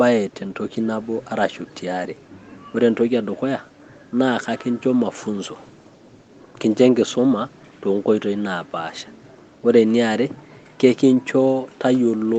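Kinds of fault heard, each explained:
No faults heard; the speech is band-limited at 8 kHz with the ordinary coding texture of a low-bitrate call codec, consistent with a normal WebRTC call path.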